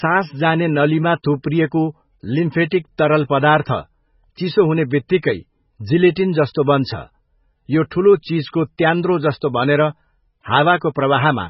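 From start to finish the speech carries heavy damage, likely from MP3 compression. Nothing sounds above 5.6 kHz, so s sounds lose their top. Weak frequency lines drop in and out between frames, giving a watery swirl. The damage fits a very low bitrate, around 16 kbps.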